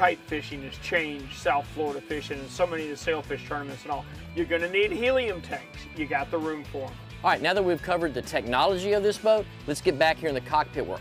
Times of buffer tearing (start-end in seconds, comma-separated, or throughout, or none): none